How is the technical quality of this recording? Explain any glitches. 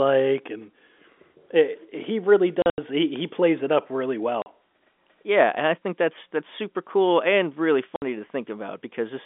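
The recording has narrowband telephone sound, roughly 250 Hz to 3.5 kHz as a G.711 line would carry it, and three dropouts of packet loss filled with silence.

At 2.62 to 2.78 s, 120 ms of audio vanishes in scattered gaps, the longest 80 ms. Shorter holes follow at 4.42 s (40 ms) and 7.96 s (60 ms). Lost packets were replaced with silence, and the gaps fit 20 ms packets. Each hole has hard edges, and the holes show as flat silent stretches in the waveform and blank vertical bands on a spectrogram.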